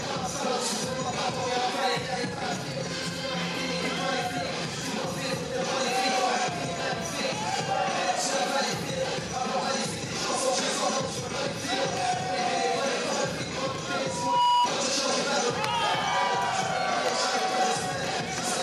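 Loudspeaker feedback squeal appears from 13.99 to 14.72 s: the microphone picks up its own loudspeaker, and at 969 Hz the loop gain passes one. That single tone swells over roughly 0.4 s into a squeal sitting about 5 dB above the surrounding audio.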